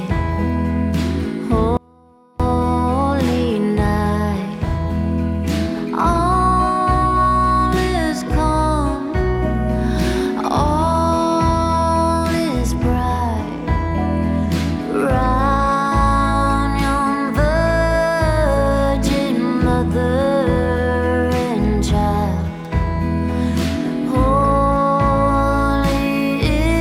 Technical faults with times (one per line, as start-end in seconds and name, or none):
1.77-2.40 audio dropout to a faint residue